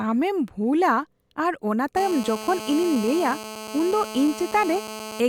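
From 1.97 s to 5.20 s a nearby 2G handset on an active call leaks its radio bursts into the audio circuitry, where they are rectified and turned into a GSM phone buzz. Because the handset transmits about 217 times a second, the speech picks up a hard, raspy drone at 217 Hz, rich in harmonics and unrelated to the talking, sitting steadily at about 12 dB below the signal until the interference stops.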